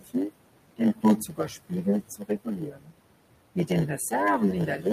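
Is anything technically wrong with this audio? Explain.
Yes. A block size mismatch (padded) runs throughout. One stage hands over shorter blocks than the next expects, and the shortfall is filled with silence. That inserts a tiny gap 100 times per second, producing a steady 100 Hz buzz, and stretches the speech to 0.919 times its proper speed, slightly slow but with its timbre intact.

Noise suppressor artifacts are also present across the whole clip. The suppressor pulls down bands it judges to be steady noise, cutting the room noise, which sits about 13 dB below the speech, by about 21 dB. Between phrases the background sinks away, then swells back under the speech.

Speech cut by the noise suppressor occurs at 0.00–0.15 s, 0.77–1.86 s, 2.03–2.94 s and 4.67–4.86 s. The suppressor mistook parts of the speech for noise and attenuated them, by up to about 21 dB around 2.03–2.94 s, so the affected speech there, roughly half a second in total within that stretch, sounds swallowed or faint.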